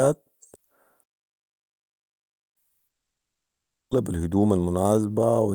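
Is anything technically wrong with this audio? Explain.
Yes, there are three separate faults in this speech clip.

From 1.03 s to 2.57 s there is a playback stall. The speech cuts off mid-flow and the output goes silent for about 1.5 s before it picks up again. The likely cause is that the player ran out of buffered data or its thread was blocked. Unlike a network dropout, the cut is abrupt: there is no fading buzz or hiss bridging into the gap, just clean silence until playback recovers.

From 2.87 s to 3.93 s comes a long network dropout, about 1.04 s long. Most likely packets stopped arriving, and the receiver tried to continue the last sound, which trails away as a fading buzz before settling into silence or a low steady noise. This is what separates it from the stall: the speech resumes further on, and about 0.88 s of it was never played at all. The gap left the playback delay changed by roughly 150 ms.

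From 4.13 s to 4.99 s the jitter buffer speed-up makes the speech run at about 115% of normal rate while its pitch stays the same. That constant pitch is what distinguishes it from a simple resampling or tape-speed error. The receiver's buffer held more audio than its target, probably because late packets arrived together. To bring the delay back down, it snipped out many tiny pitch-period slices, roughly 150 ms in total, so the delivery sounds hurried.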